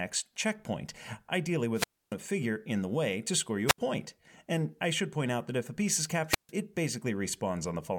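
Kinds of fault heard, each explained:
Wireless microphone squelch dropout: The radio signal from an analogue FM microphone fades. The receiver's squelch then mutes the output to keep static out. Each time, the speech gives way to a short rise of hiss, then a hole of near silence. This happens three times. From 1.74 to 2.15 s, the mute lasts 282 ms. From 3.67 to 3.78 s, it lasts 72 ms. From 6.27 to 6.51 s, it lasts 147 ms. The voice then returns.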